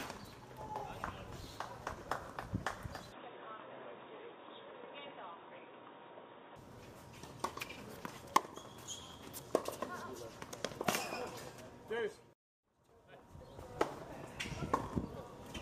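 Input switched to a poorer device, from 3.12 to 6.56 s: the sound abruptly narrows to nothing above 3.8 kHz and turns dull and boxy, with a faint new noise floor about 35 dB down but no silence or level jump, likely a change to a lower-grade microphone mid-recording.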